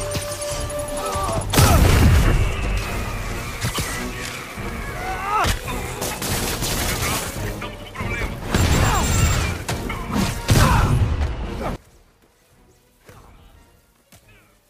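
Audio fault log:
11.76 to 14.69 s, one channel inverted: from here to the end the sound drops by about 25 dB and turns faint. Likely one side's polarity flipped, so shared content cancels in mono.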